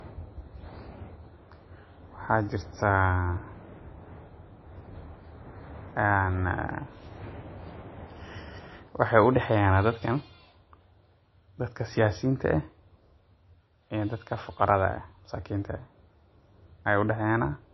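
Low-bitrate audio saved at a high bitrate runs through the whole speech clip: nothing is present above about 5.8 kHz, and the smeared, watery quality of a heavily squeezed MP3 is heard from start to finish. This likely comes from a stream first coded at around 25 kbit/s and later re-saved as a 320 kbit/s MP3. The second encoding cannot rebuild the removed detail, so the large file keeps the first codec's cut-off and artefacts.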